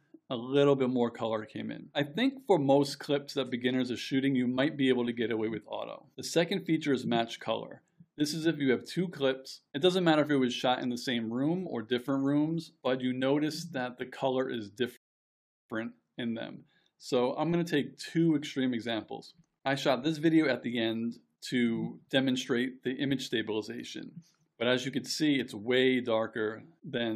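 The player ran out of downloaded audio at 14.97 s and had to wait for more data to arrive, a rebuffering stall lasting until 15.70 s. The playback buffer emptied before the next chunk came in, so output halted rather than skipping ahead. The sound drops abruptly to silence for 0.73 s, then picks up exactly where it stopped, with nothing missing but that extra time added to the running length.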